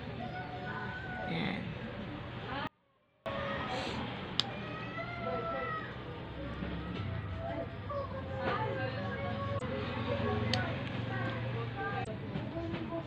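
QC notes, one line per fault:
2.67 to 3.26 s, audio dropout to a faint residue: the path likely lost its wanted signal for about 0.59 s while everything after the break stayed live, so the sound cuts out abruptly mid-flow rather than pausing or fading. What fills the gap is not silence but a faint residue, roughly 35 dB below the signal's normal level, until the full sound snaps back at 3.26 s.
9.55 to 9.62 s and 12.01 to 12.07 s, damaged data in a compressed stream: at each point a stretch of the encoded data was corrupt, so the decoder misread those frames, lost sync and hunted for the next valid frame header before carrying on. Each event lasts about 70 ms and is heard as a brief chirp, squawk, click or short hole.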